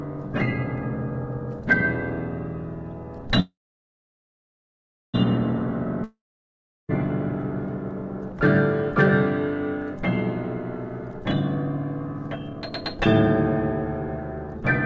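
A call audio freeze runs from 3.40 to 5.16 s: the last sound trails off into about 1.61 s of silence, likely from delayed packets draining the jitter buffer, then resumes exactly where it stopped.

A long network dropout follows from 6.04 to 6.91 s: the sound fades into about 0.72 s of silence, likely because packets never arrived, and returns with 0.86 s lost.

Jitter buffer speed-up occurs at 10.84 to 11.25 s (124% speed, roughly a tenth of a second cut) and 12.28 to 13.00 s (135%, roughly a third of a second cut). Pitch-period pieces were trimmed to shrink excess buffered delay, so the audio sounds hurried at unchanged pitch. Nothing above 8 kHz is present, which fits the G.722 call codec at 64 kbps.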